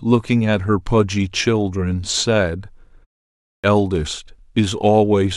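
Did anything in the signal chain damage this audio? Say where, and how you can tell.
Yes. There is a clipped start after a pause at the playback stage: after a 0.43 s gap, speech at 3.4 s comes in abruptly, missing about 240 ms through 3.64 s. The output device was waking from sleep. The waveform shows flat silence cut into an abrupt onset, with no gradual build-up of energy on the spectrogram.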